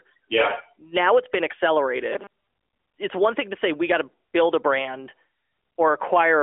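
From 2.12 to 2.53 s the speech turns into a rigid, metallic buzz pitched at 200 Hz, robotic sound from repeated short buffers. The likely cause is audio arriving too late, so the player kept looping a fragment of about 5 ms (one period of 200 Hz) while most of the incoming signal in that stretch was dropped. The steady buzz still roughly tracks the syllables, over a band-limited AMR narrowband mobile line with nothing above about 3.6 kHz.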